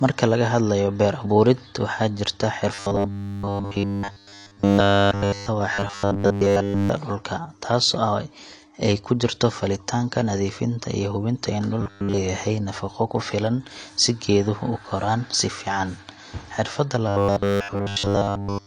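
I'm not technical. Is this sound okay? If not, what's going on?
No. Two problems stand out in this speech.

AAC compression affects the whole clip. The voice sounds dull and muffled, with a smeared, fizzy texture on hissy sounds like "s". This is likely from saving or sending the audio with too little data, so the encoder threw away detail it judged least noticeable.

Robotic sound from repeated short buffers occurs from 2.74 to 5.48 s, 5.74 to 6.89 s, 11.81 to 12.18 s (right after "nadiifinta iyo hubinta in" and just before "nafaqo ku filan si"), and 17.09 to 18.67 s. In these stretches the voice becomes a stiff, metallic buzz at a steady 100 Hz. The likely cause is fresh audio arriving too slowly, so the playback kept looping the last tiny slice, about 10 ms long, instead of the real sound. That gap was filled completely in the first and last stretches and mostly in the other two.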